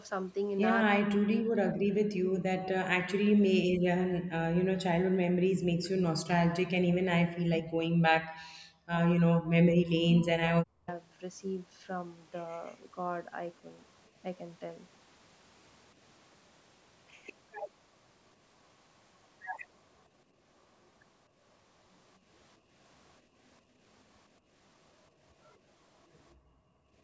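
Speech on a call, where from 0.9 to 4.24 s, 4.51 to 8.95 s and 9.17 to 10.88 s the voice repeatedly sinks, thins and breaks up, dropping by as much as around 40 dB. That is speech suppressed in double talk, likely caused by the echo canceller mistaking this talker for loudspeaker echo while the far side spoke. Later, the room sound briefly dips by about 8 to 11 dB at 22.58 to 22.71 s, 23.23 to 23.38 s and 23.62 to 23.8 s, then falls about 23 dB from 26.35 s to the end. That is background gated by the echo canceller, which clamped the microphone while the loudspeaker played.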